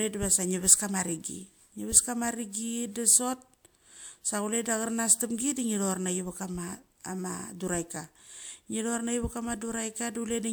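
No technical faults can be heard in this recording.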